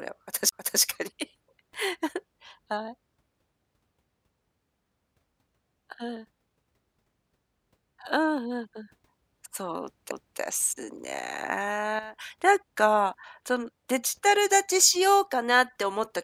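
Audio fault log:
0.49–0.52 s and 10.11 s: CD skip. The laser jumps track on the disc, so playback mutes briefly (roughly 30 ms, then a few milliseconds) with a tick and resumes elsewhere in the speech.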